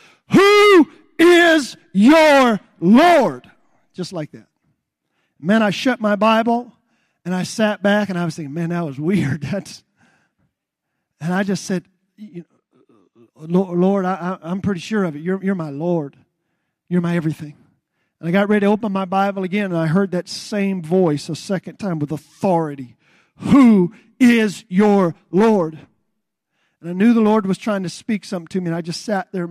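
From 12.23 to 13.23 s, one channel arrives a couple of samples late, a few hundredths of a millisecond behind the other, and the two are summed to mono. This channel delay (comb filtering) cancels the top end around 10 kHz, leaving the speech dull.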